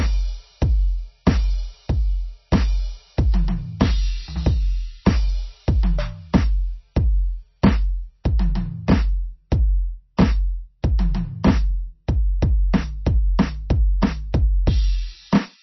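Throughout this music, nothing sounds above 5.9 kHz, and the sound is watery and smeared. That is likely heavy MP3 compression, fitting a very low bitrate near 24 kbps.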